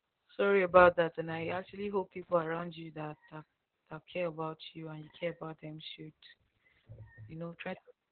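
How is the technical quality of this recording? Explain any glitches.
Poor, with one fault running through the whole recording: Opus voice compression. Heavy damage from the SILK mode squeezes the speech into a narrowband channel, which fits a bitrate near 8 kbps. Content above 4.4 kHz is gone, leaving the voice muffled, hoarse and faintly robotic from the coarse excitation coding. A spectrogram shows a hard, flat ceiling at 4.4 kHz with empty space above it for the whole clip.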